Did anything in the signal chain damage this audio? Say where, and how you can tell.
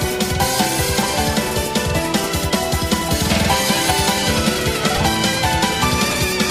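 Yes. At the codec stage, a corrupt frame was decoded from 4.95 to 4.98 s as a brief error peaking around -5 dBFS. Damaged bits across a couple of frames misplaced energy, which shows as a brief broadband smear on a spectrogram and a jagged spike on the waveform.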